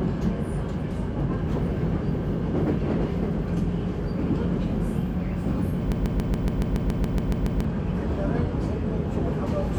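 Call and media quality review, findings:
Broken-record loop, 5.92 to 7.65 s: a 140 ms fragment replays 12 times back to back, so the sound stutters on one grain and whatever should've played there is gone. Likely a stalled player or stream re-sending its last buffer.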